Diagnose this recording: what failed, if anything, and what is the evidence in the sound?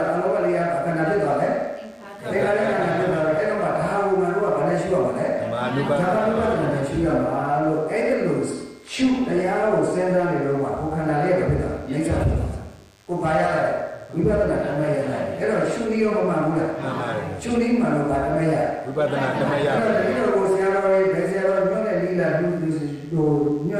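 A faint, thin, steady buzz at 100 Hz, rich in harmonics and about 35 dB below the signal, runs throughout: DECT cordless phone buzz, with 10 ms radio bursts rectified in the analogue wiring.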